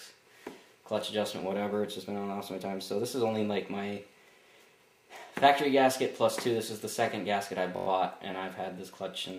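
At 7.77 to 7.87 s the system froze briefly while the sound hardware kept replaying its ring buffer, a system hang loop. One 21.33 ms piece, fitting a 1024-sample buffer, repeats five times at 46.9 Hz, producing a brief buzz at that rate.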